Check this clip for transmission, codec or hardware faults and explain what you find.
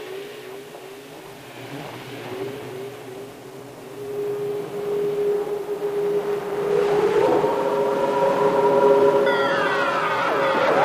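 One fault runs throughout: low bit depth without dither. Quiet passages sound grainy, with distortion roughly 30 dB below the sound. Likely rounded to a coarse level grid, fitting 7 bits.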